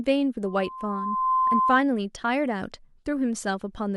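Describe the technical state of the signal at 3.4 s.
At 3.4 s the speech signal is intact, with no audible dropout, distortion, glitch or other technical fault at that moment.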